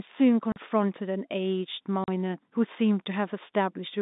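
Packet loss filled with silence cuts 40 ms holes at 0.52 to 0.56 s and 2.04 to 2.08 s. Each fits two 20 ms packets and shows as a flat waveform gap whose hard edges appear as vertical spectrogram streaks.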